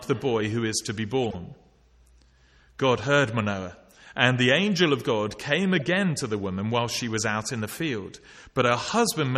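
Corrupt frames are decoded at 1.22–1.35 s, 5.76–5.82 s and 8.85–8.91 s. Damaged data is played anyway, giving chirping bursts. The first spans several frames. Each shows as misplaced spectrogram energy and a waveform spike, and the middle burst is weaker.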